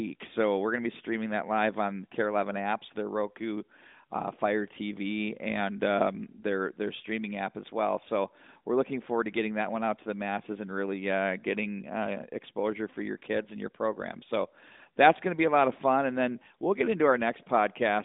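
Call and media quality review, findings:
Nothing to flag on this one: no faults turned up anywhere in the speech clip.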